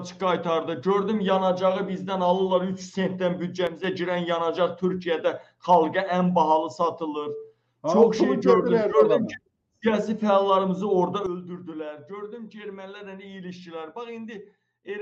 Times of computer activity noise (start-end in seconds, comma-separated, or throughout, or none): none